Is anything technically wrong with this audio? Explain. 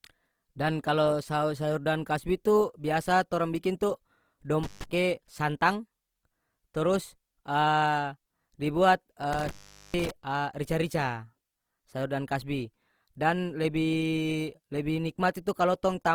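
Yes, two problems. The whole speech track sounds grainy and rough, tones turning noisy rather than swirly, which likely comes from Opus compression in its music mode at a rate that fits roughly 24 kbps.

There's also an intermittent contact, a loose plug or cable briefly opening: crackly dropouts at 4.63–4.84 s (open about 146 ms) and 9.33–10.11 s (open about 432 ms), leaving faint hiss.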